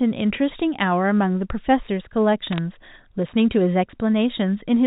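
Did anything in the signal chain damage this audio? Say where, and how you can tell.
Yes. Bit errors on a digital phone line, 2.52 to 2.58 s. Brief sharp ticks over intact speech mean flipped bits corrupted single G.711 samples in transmission.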